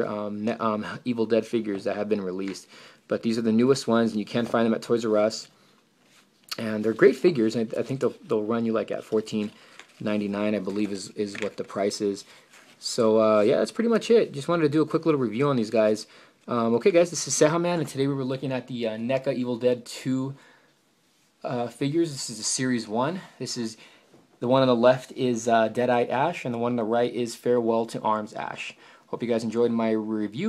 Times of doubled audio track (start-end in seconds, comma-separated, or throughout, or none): none